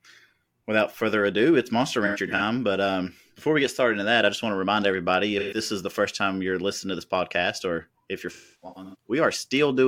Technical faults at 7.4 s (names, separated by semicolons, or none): none